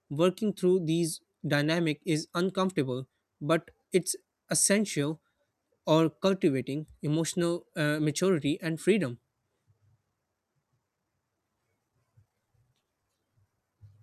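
No technical faults occur at any point in the speech, so there is nothing to describe in time order.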